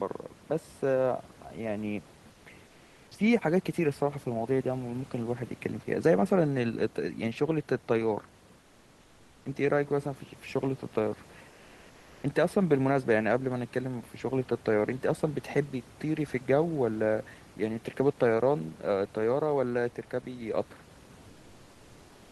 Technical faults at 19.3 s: none

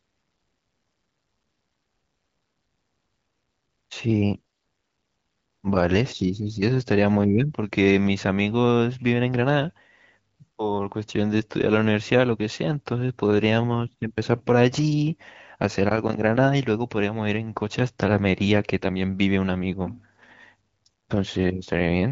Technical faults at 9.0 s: none

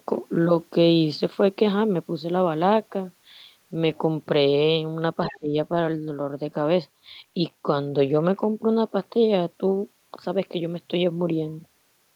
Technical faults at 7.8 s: none

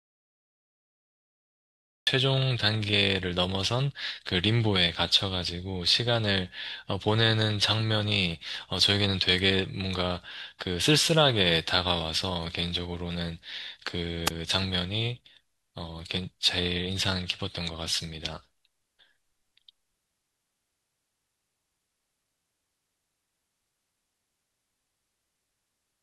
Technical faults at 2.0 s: audio dropout to silence

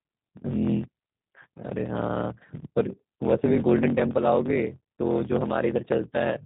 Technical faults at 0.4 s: block size mismatch (truncated); G.729 codec

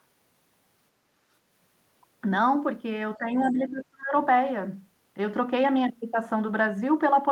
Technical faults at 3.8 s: speech suppressed in double talk

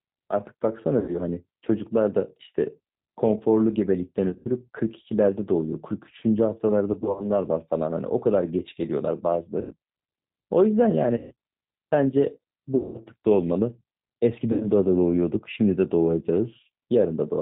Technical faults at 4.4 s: G.729 codec; VoIP packet loss concealed by the speech codec

